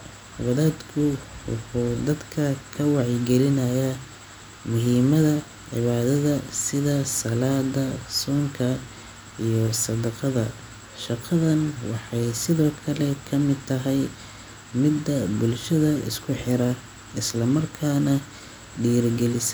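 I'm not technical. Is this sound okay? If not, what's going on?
Yes, this recording sounds fine; nothing is wrong.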